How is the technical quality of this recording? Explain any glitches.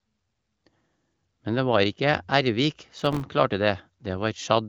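A short burst of processor overload crackle runs from 2.98 to 3.22 s, in speech carried over what sounds like an AMR-WB HD Voice connection with nothing above about 7.6 kHz. In that quarter second the processor kept missing the deadline for very small buffers, around 1.5 ms each, about twenty times over. Each miss dropped a sliver of silence with hard edges into the sound, so together they form a gritty tearing. A single network dropout would leave one longer, cleaner hole instead.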